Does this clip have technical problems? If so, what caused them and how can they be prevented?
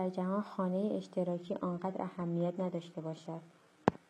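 Yes. Adaptive stream at a lower bitrate, 1.31 s to the end: the speech abruptly loses treble and turns synthetic without a gap, as a slowed connection forced a low-bitrate version. A steadier connection or a larger playback buffer would keep the player from stepping down.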